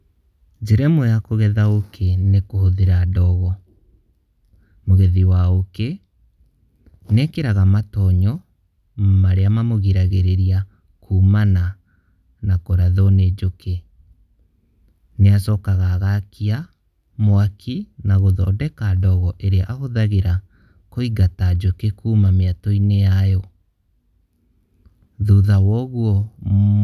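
No technical faults detected.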